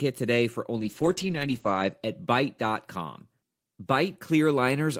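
Just after "today for", from 0.79 to 1.99 s, a call bitrate drop starves the encoder, which fits about 10 kbps, so the speech turns coarse and muffled, cut off above 8 kHz.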